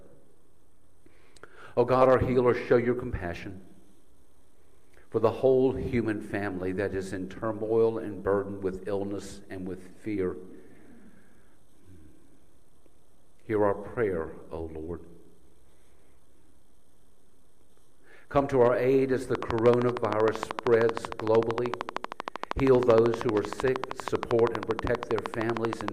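From 19.35 s to 25.89 s a train of clicks runs over the audio: sharp, near-identical ticks at a regular 12.9 per second, about a hundred in all, standing roughly 20 dB above the surrounding sound. The likely cause is electrical interference or a faulty connection or power supply injecting pulses. On a waveform they show as evenly spaced thin spikes towering over the signal; a spectrogram shows them as a comb of narrow vertical broadband lines.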